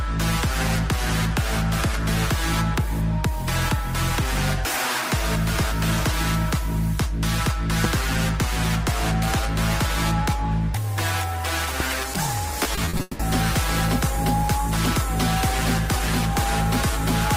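A voltage step, likely from a switch, plug, static discharge or driver glitch, entered the signal path twice and produced a loud pop each time. The first, at 7.84 to 7.87 s, is a single sharp pulse that peaks roughly 15 dB above the surrounding audio. The second, at 11.80 to 11.83 s, is a single pop about 10 dB above it. Each is a brief thump sitting on top of the sound, which carries on underneath without a break.

Shortly after the second pop, from 12.63 to 13.21 s, packets kept arriving late or not at all, causing repeated packet loss with a robotic sound. Six holes open up in quick succession, the longest about 180 ms. Each one is patched by stretching out the last audio that did arrive, and roughly half of this stretch is made of these fills. The result is choppy, with pieces of the sound missing.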